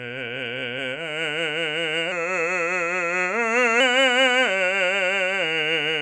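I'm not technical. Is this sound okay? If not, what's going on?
No. From about 2.12 to 3.80 s the music drags and sinks, running at roughly 92% speed and about a semitone and a half flat. That's a wrong sample rate: the audio is played back slower than it was recorded, which fits 24 kHz material played at 22 kHz.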